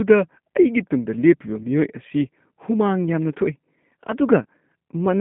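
The whole clip passes through a G.729 codec at 8 kbit/s, which resynthesises the speech from a vocal tract model and a few pulses per frame, leaving a band of roughly 150 Hz to 3.5 kHz with plainly audible roughness and a faintly synthetic texture.

VoIP packet loss concealed by the speech codec occurs twice: just after "ꯑꯩꯒꯤ ꯇꯨꯡꯗ ꯂꯦꯞꯄꯤꯕ" from 1.63 to 1.67 s, and again from 4.43 to 4.46 s. Each time about 20 ms of audio goes missing, which fits a single lost packet. The decoder stretches the preceding sound into a brief, fading fill, and the speech sounds thin for a moment afterward.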